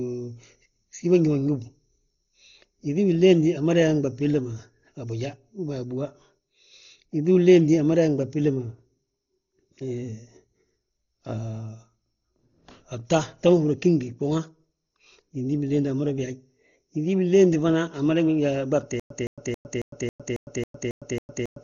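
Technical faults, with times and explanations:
Throughout, Dolby Digital compression: the speech sounds dull and band-limited, with nothing above 7 kHz and a rough, fluttering noise clinging to tonal parts. This is likely a very low-rate AC-3 style encode, around 32 kbps, where starved frequency lines get filled with dither noise rather than just muffled.
19.00 to the end, stutter with silent gaps: a 166.56 ms burst repeats nine times, each followed by 106.75 ms of digital silence, giving an even 273.31 ms cycle that runs to the end. Unlike a dropout, the same fragment returns each time, pointing to a likely stalled stream replaying its last buffer.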